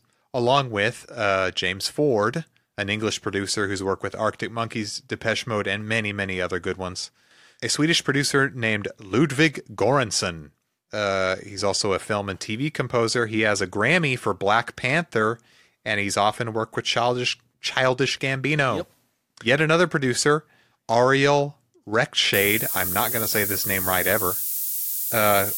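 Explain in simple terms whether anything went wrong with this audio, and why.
From 22.34 s to the end at 25.58 s, the speech picks up low bit depth with noise shaping: a thin hiss, roughly as loud as the talking, pointing to about 5 bits, and pushed sharply into the treble rather than evenly spread like ordinary background hiss.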